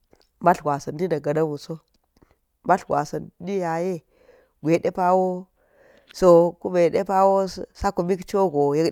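Nothing stood out as a technical fault when listening through this speech recording.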